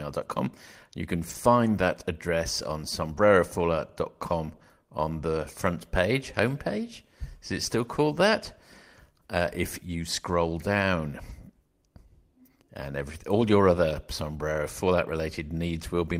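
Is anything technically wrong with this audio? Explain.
Yes. The speech has two kinds of packet-loss fault.

There is a lost packet rebuilt from error correction at 1.29 to 1.35 s, just before "that address on". About 40 ms were rebuilt, which fits two lost packets. Single rebuilt stretches of 20 ms follow at 3.17 s, at 4.61 s before "on the front page", and at 11.29 to 11.31 s. Each time, the next packet carried a low-bitrate copy of the missing one. The decoder played that copy, so nothing drops out. Those moments sound briefly rougher and noisier.

There is also a short concealed packet loss at 4.57 to 4.61 s, right before "on the front page". Here no backup copy arrived in time. The decoder extended the preceding sound to cover the hole, carrying on its pitch or shaped noise, then faded back into real audio. This leaves a brief smear or wobble, and it leads straight into the rebuilt stretch at 4.61 s.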